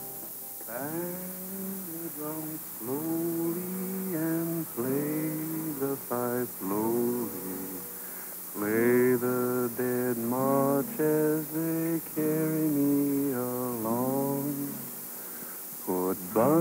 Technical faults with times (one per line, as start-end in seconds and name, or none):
0.00-16.60 low bit depth with noise shaping